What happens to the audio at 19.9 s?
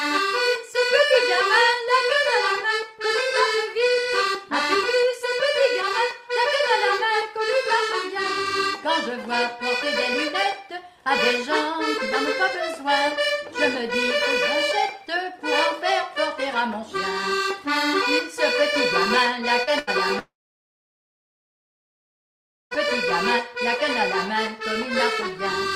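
A burst of packet loss ends there: from 19.79 to 19.9 s a run of audio never reached the player in time, and it bridged the hole by stretching the last sound it had for about 81 ms, fading it down into a held buzz or hiss. When playback resumes, roughly 80 ms of the original is simply gone. Unlike a plain dropout, the gap is filled with a smeared, decaying echo rather than silence, and the sound jumps ahead on return.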